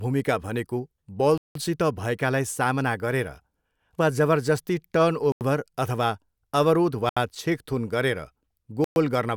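A likely Bluetooth stall, with delayed packets emptying the headphones' buffer, cuts the speech to silence four times: at 1.38 s for 177 ms, 5.32 s for 88 ms, 7.09 s for 73 ms and 8.84 s for 118 ms.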